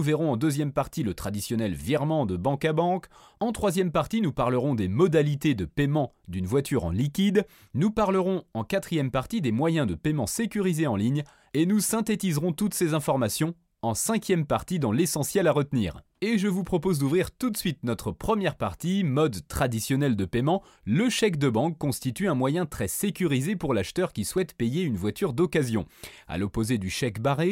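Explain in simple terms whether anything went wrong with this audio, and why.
There's one glitch, at about 24.38 s, between "sécurisé pour l'acheteur qui" and "payer une voiture d'occasion": a single sharp click. It's most likely dropped samples, where a tiny fraction of a millisecond of audio went missing, so the waveform suddenly jumps.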